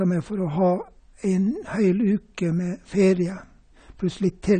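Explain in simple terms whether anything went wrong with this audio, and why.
The speech sounds dull and smeared from start to finish, with a fizzy, warbling edge on hissy sounds and nothing above about 9 kHz. That points to AAC compression, likely squeezed too hard: the encoder discarded the highest frequencies and coarsely approximated the rest.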